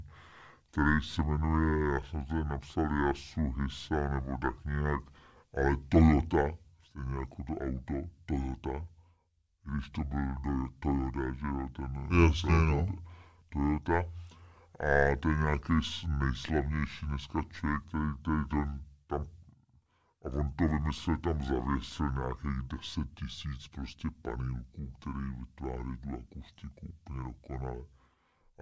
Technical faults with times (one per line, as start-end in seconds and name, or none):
0.00-28.61 wrong sample rate